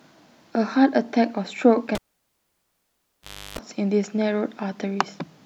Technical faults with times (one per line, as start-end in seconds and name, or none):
1.95-3.59 cable pulled and plugged in